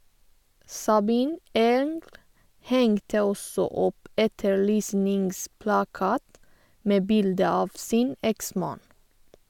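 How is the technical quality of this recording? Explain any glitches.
Nothing stood out on listening to this recording, and there are no glitches to explain.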